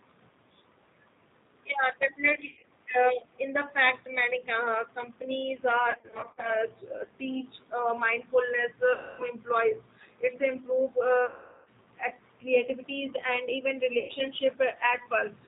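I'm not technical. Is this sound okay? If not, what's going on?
No. The speech was sent through the G.729 codec, a phone-call compressor that rebuilds the voice from a simplified model and drops everything above 4 kHz. Throughout the clip, that makes it plainly dull, slightly rough and somewhat artificial.

There is also VoIP packet loss concealed by the speech codec. Chunks of the call went missing, and the decoder filled the gaps by stretching the last sound. It becomes a fading buzz or smear at 2.46 to 2.71 s, 5.91 to 6.52 s (after "many uh companies"), 8.93 to 9.24 s (after "uh mindfulness"), 11.26 to 11.69 s and 13.99 to 14.13 s.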